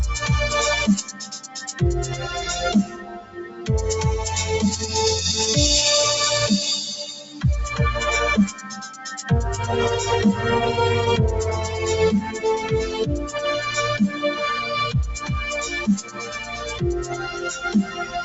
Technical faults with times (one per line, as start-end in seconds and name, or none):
0.00-18.24 noise suppressor applied to music or sounds
1.04-1.81 sound cut by the noise suppressor
2.84-3.69 sound cut by the noise suppressor
7.09-7.44 sound cut by the noise suppressor
8.49-9.30 sound cut by the noise suppressor
12.24-12.40 sound cut by the noise suppressor
15.99-18.24 sound cut by the noise suppressor